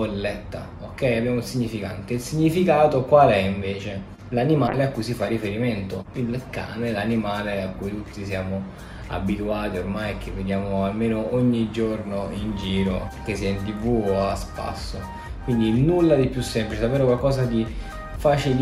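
A call bitrate drop runs from 4.68 s to 11.01 s. The bandwidth estimate fell, so the encoder coded far more coarsely and trimmed high frequencies. The sound turns rough and muffled, worst for about 4 s, which fits a fall from roughly 128 to 28 kbps.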